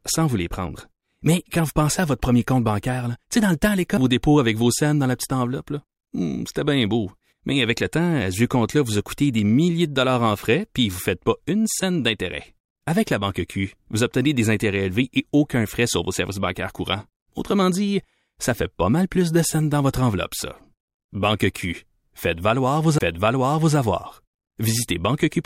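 The clip is speech, with one CD skip near the end. From 22.98 to 23.01 s the sound drops out in a brief mute of around twenty milliseconds, heard as a tick or short gap. Playback then picks up from a different point in the recording. This happens when a knock or a flaw on the disc throws the laser onto another turn of the spiral. The player silences the output for an instant and resumes reading from that new track position.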